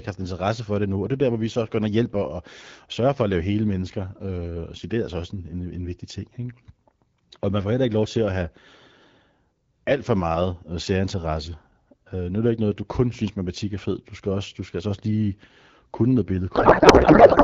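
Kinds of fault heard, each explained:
Codec payload misread: from 16.55 s to the end, the two ends disagree on how the AMR bits are packed. Frames packed octet-aligned get read as bandwidth-efficient, so the fields land in the wrong places. The speech turns into garbled noise and warble that barely tracks it, while the AMR wideband coding underneath sounds clear up to that point.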